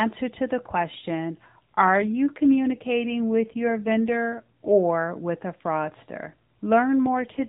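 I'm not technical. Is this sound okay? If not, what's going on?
No. There are two AMR rate drops, from 2.02 to 4.72 s, ending just before "with a fraudster", and from 7.06 s to the end. This is a mobile phone call. When the radio signal weakens, the network tells the phone's speech codec to use fewer bits for the voice and more for protecting against errors. The speech keeps its usual phone-like sound with no gaps, but turns rougher and more synthetic until the connection recovers.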